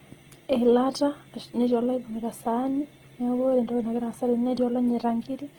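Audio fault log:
Throughout: Opus compression. The speech sounds rough and grainy, with starved bands filled by folded or noise-like content instead of leaving holes. Damage is plainly audible and likely comes from Opus's CELT mode at a low rate, about 16 kbps, though the band still reaches 20.2 kHz.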